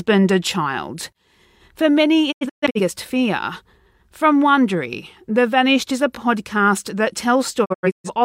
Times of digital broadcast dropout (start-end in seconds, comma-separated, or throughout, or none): 2.31-2.81, 7.64-8.10